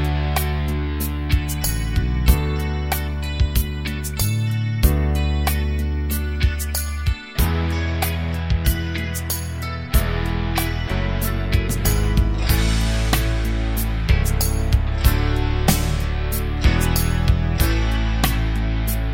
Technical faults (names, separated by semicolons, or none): none